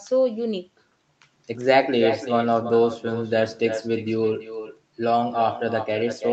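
From start to finish the speech carries an echo with no canceller behind it. The far end appears to be playing the call through a loudspeaker, and its microphone picks that playback up and sends it straight back, so each phrase returns roughly a third of a second later at about 11 dB below the original. The returning copy sounds thinner, trailing each phrase, within a band that already stops near 8 kHz.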